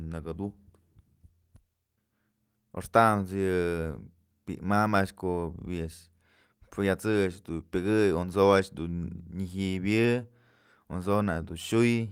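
Nothing stood out as a technical fault on listening to the speech recording.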